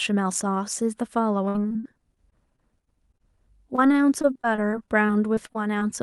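Speech over a call path where packets were repeatedly lost between 1.45 and 3.21 s and again from 3.75 to 5.83 s, repeated packet loss (robotic sound). The concealer stretches the last sound across each hole, giving choppy speech with pieces missing. The first stretch is worse, with gaps up to 60 ms. The band tops out near 12 kHz, consistent with Opus.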